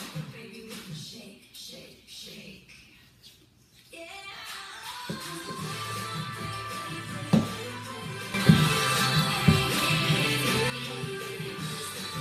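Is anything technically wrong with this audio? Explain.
Yes, there's a sudden gain jump from 8.34 s to 10.7 s. At 8.34 s the level leaps up by about 11 dB in a single step, and the background noise comes up right along with the sound, so it's not a change in the source itself. It then drops back at 10.7 s. The likely cause is a digital gain setting or bit shift applied instantly, from one sample to the next, with no ramp to smooth the transition.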